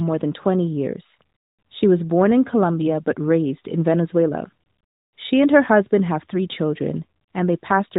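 This is a speech recording, and nothing in it sounds technically wrong.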